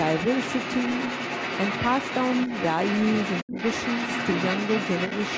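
Speech recorded on a call, where the echo canceller most likely failed to remove the loudspeaker signal from the microphone, so the other side's voice leaking through runs under the whole clip, from 0 to 5.4 s, sitting only a few decibels below the talker. Between 3.44 and 3.56 s, both sides talking at once likely pushed the canceller to turn everything down, and this speech suppressed in double talk dips the talker's voice by roughly 20 dB for about a tenth of a second. The call's microphone processing also band-limits the audio, with nothing above 8 kHz.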